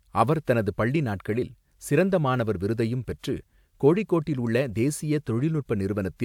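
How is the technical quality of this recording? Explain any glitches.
The recording has no technical faults. There are no glitches to explain in this speech.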